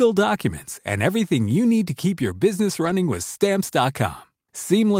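It's a speech clip with a lost packet rebuilt from error correction at 2.85 to 2.91 s: about 40 ms turns briefly rough and noisy rather than dropping out, which fits two lost packets being filled in by the decoder from lower-quality backup copies.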